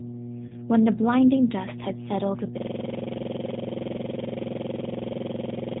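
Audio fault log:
throughout, mains hum: a steady 60 Hz tone with low harmonics sits under the speech, only modestly quieter than it. A ground loop or nearby transformer is leaking the power line into the signal path, so the drone never changes with the talker.
throughout, G.729 codec: the speech is band-limited to nothing above 4 kHz and sounds plainly rough and synthetic. At 8 kbit/s the codec rebuilds each 10 ms frame from a vocal tract filter, pitch predictor and a few pulses.
0.48 to 0.54 s, VoIP packet loss concealed by the speech codec: about 20 ms of audio goes missing, consistent with one lost packet. The decoder fills the gap by extending its last pitch and filter with falling gain, giving a brief fading stretch of the last sound, and the speech stays weak until frames rebuild.
2.58 s to the end, system hang loop: a single 46.44 ms slice repeats exactly, about 70 times, as a rattling 21.5 Hz stutter. 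The system froze while the audio hardware kept cycling its ring buffer, which fits a 2048-sample buffer.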